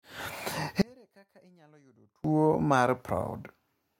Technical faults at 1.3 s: one channel inverted

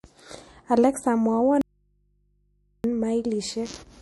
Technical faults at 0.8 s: MP3 compression

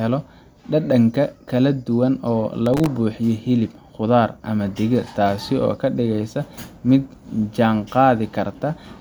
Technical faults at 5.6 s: none

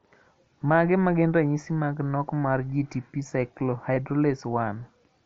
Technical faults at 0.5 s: none

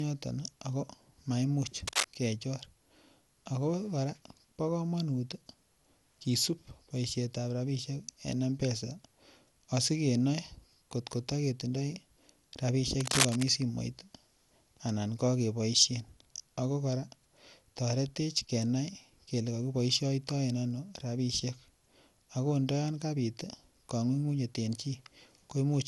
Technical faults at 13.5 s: generation loss; cable scratch noise

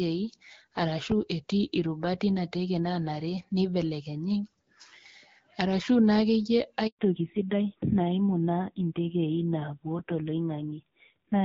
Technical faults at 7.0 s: handover gap; fallback to narrowband

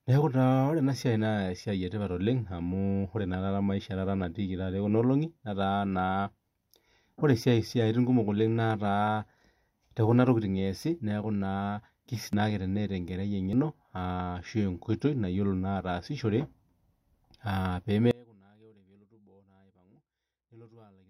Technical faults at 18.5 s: audio dropout to a faint residue

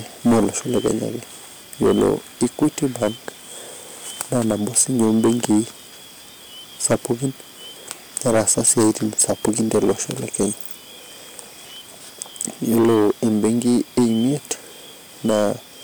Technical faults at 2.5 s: hard clipping

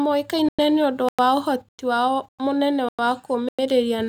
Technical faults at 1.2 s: gap between chunks

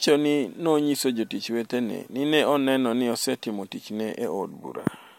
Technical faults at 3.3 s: none

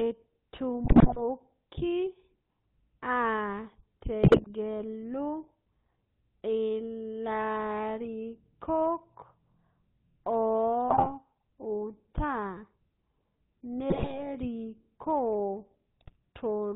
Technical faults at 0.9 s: GSM full-rate codec; GSM bit errors

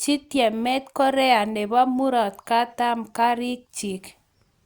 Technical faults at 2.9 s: none

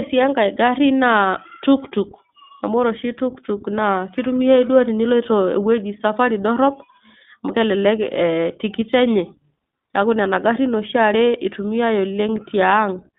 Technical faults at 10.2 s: iLBC codec

